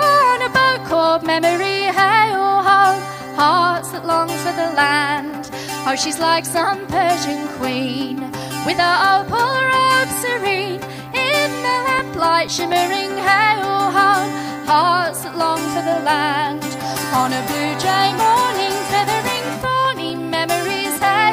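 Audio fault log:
11.50–13.21 s, CD scratch ticks: eight regular ticks, close to five a second, the longest a few milliseconds. A blemish defeats error correction once per disc revolution, so the player conceals each damaged patch with interpolation or muting.
18.64–20.34 s, CD scratch ticks: another run of eight evenly paced ticks at the same once-per-turn rate, very brief, the longest around 2 ms. Again the data lost exceeds what correction rebuilds, leaving short concealed gaps.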